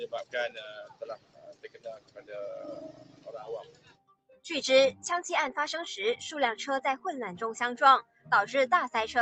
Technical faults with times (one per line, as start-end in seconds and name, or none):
0.00-9.21 noise suppressor applied to music or sounds
0.24-2.32 sound cut by the noise suppressor